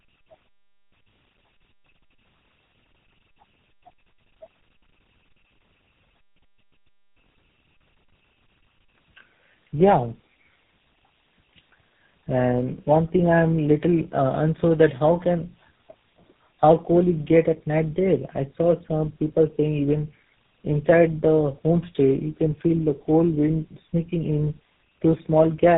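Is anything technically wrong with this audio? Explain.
Yes. Tandem speech coding degrades the speech for the whole clip. The call seems to have crossed several links, each with its own speech coder. At each border it was decoded and coded again, so every stage worked on the previous stage's damage. The character suggests about three speech coders in a row, such as CVSD, G.729A and GSM full rate. The result sounds rough, muffled and warbly. On a spectrogram, nothing appears above about 3.7 kHz, and the harmonics look smeared and unsteady.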